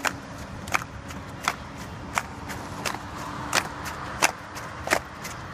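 Dropped buffer (overrun) at 0.56, 2.87, 3.70 and 4.99 s: brief jumps where the sound skips ahead roughly 10 ms (about 20 ms at 3.70 s), likely from samples overwritten before being read.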